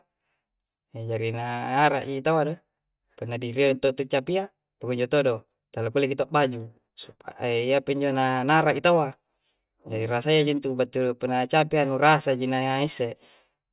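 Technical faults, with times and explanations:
Nothing technical goes wrong anywhere in this speech recording, so there's nothing to flag here.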